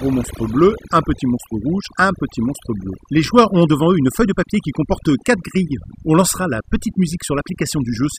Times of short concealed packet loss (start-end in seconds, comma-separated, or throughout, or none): none